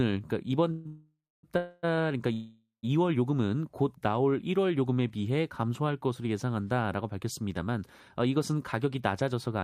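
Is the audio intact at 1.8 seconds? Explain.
No. A call audio freeze runs from 1.57 to 1.85 s, likely from delayed packets draining the jitter buffer. The last sound is stretched into a fading buzz, drawn on a spectrogram as flat, smeared bands, before speech resumes unbroken, about 256 ms late.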